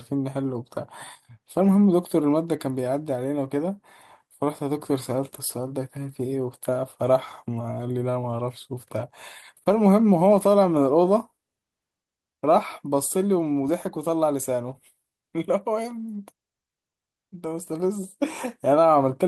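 Small timing hiccups and a faintly unsteady pace run through the whole speech clip. The cause is clock drift between sender and receiver: the sender's clock runs roughly 2% slow against the receiver's. Audio arrives a little too slowly, so the receiver's jitter buffer keeps draining. To keep playing, the receiver has to pad the stream, and those padding points are the brief stumbles heard at uneven intervals rather than on a regular beat.

Those stumbles are the repeated timing corrections, heard from 0.76 s to 18.88 s. They give a slightly halting, stretched delivery, as if playback were running at about 98% of normal speed. Each one is a tiny repeated piece of audio, inserted to make up for the slow sender. All of the corrections go the same way, lengthening the sound and never shortening it. They are spaced irregularly and together add something like 0.4 s.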